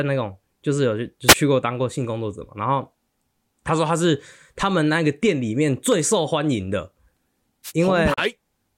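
At 1.27 to 1.35 s and again at 7.64 to 7.72 s, a wireless microphone noise hit gives a brief swish of static over the speech. The analogue FM radio link fades as reflected paths cancel, so receiver noise rises into the audio for under a tenth of a second.

At 8.14 to 8.18 s, a digital broadcast dropout mutes the speech. The receiver stopped getting good frames and went silent with an 8 ms fade. The gap fits one lost frame of about 32 ms, and that audio is gone.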